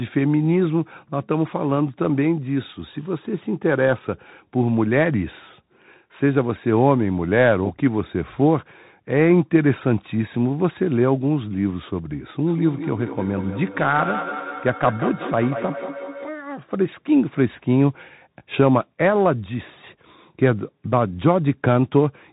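Throughout, a Bluetooth CVSD headset codec codes each sample as one up-or-down step and cuts everything above 3.8 kHz, leaving muffled, scratchy speech over granular hiss.

From 12.46 to 16.38 s, feedback echo between two devices loops the speech back through a second device, repeating it roughly every fifth of a second, about 10 dB below the speech.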